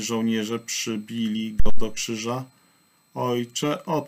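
At 1.60 s a phantom power thump hits. A supply switched state on a live input, and the step passed through the coupling capacitors. It peaks around -7 dBFS and decays within 62 ms, over by 1.87 s.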